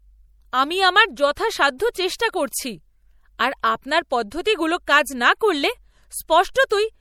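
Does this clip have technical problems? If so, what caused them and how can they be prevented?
Yes. MP3 compression runs through the whole clip: the speech has plainly audible codec damage, with a watery, swirling quality where weak frequency components drop in and out from frame to frame, and consonant attacks are smeared. Content still reaches about 20.3 kHz, so the damage lies in how bits are spread rather than in a lost treble band. The likely cause is an MP3 encode at a low bitrate, which fits roughly 64 kbps. To prevent it, keep the original uncompressed file or encode at a much higher bitrate.

Pre-echo occurs at 1.35 s, just after "আমি আমার", then at 2.18 s and 6.54 s. At each point a short hiss of about 16 to 19 ms sits just before a sharp attack, which sounds softened. The codec spreads its quantisation noise across a whole block, so noise sized for the loud onset also fills the quiet moment before it. 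To prevent it, use a higher bitrate or an encoder with good short-block switching for transients.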